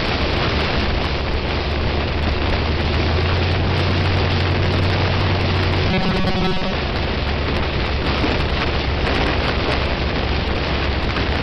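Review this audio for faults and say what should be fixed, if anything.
From 5.91 to 6.74 s the sound turns into a rigid metallic buzz at 188 Hz, with the robotic sound from repeated short buffers covering roughly 70% of that stretch. The likely cause is audio arriving too seldom, so a chunk of about 5.3 ms keeps being replayed while real audio gets skipped. Keeping the input buffer fed, with a bit more headroom or steadier scheduling, would prevent it.

At 10.25 to 10.39 s there are frames out of order: two neighbouring blocks of three frames each, roughly 70 ms per block, play swapped, giving a garbled flutter with no time lost. Reordering packets by sequence number in a jitter buffer before decoding would stop it.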